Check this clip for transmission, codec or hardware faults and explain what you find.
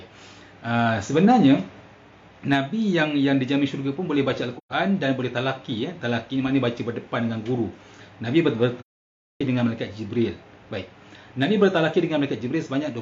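There are two dropouts from AAC frame loss with muting. The first runs from 4.57 to 4.72 s, which fits about three lost frames. The second runs from 8.80 to 9.41 s, which fits about fourteen. The decoder had no data for those frames, so it filled them with silence. The overlapping transform windows fade the sound out and back in at each edge. Each gap is a soft-edged hole. The second hole is much longer.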